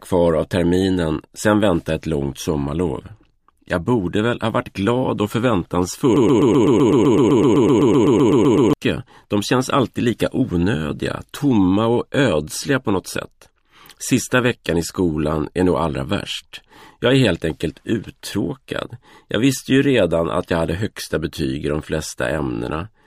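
A stall in the player, encoder or stream likely left it resending its last held fragment, producing a broken-record loop from 6.16 to 8.73 s: a 127 ms slice of audio repeats exactly, back to back, about 20 times, and whatever should have played during those 2.6 s is lost.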